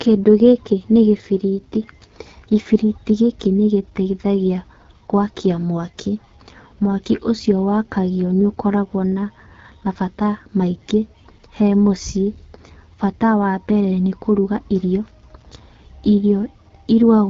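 Rough, raspy speech runs the whole length of the recording, with nothing above about 7.2 kHz. That points to the AMR wideband (HD Voice) codec running at one of its two lowest modes, most plausibly 8.85 kbit/s. At that rate the pulse-driven vocal tract model has too few bits to capture the voice's fine detail, and only noise shaped to mimic the spectrum fills the 6.4 to 7 kHz band.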